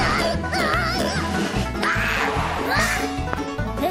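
There's a loud pop problem: one pop at 0.74 to 0.76 s, a double pop between 1.83 and 2.06 s, and another at 3.33 to 3.35 s, each jumping roughly 15 to 20 dB above the sound beneath it, most likely a voltage spike from a plug, switch or static discharge.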